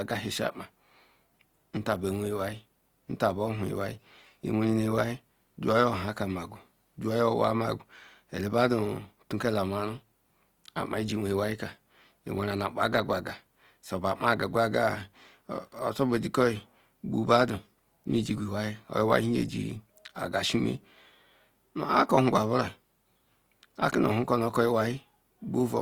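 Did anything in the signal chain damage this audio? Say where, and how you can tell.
Yes, at the codec stage. Throughout the speech, tones sound grainy and rough, with noise filling bands instead of MP3-style swirling holes, while content still reaches 20.2 kHz. That points to likely Opus compression in its CELT mode, at a low bitrate near 24 kbps.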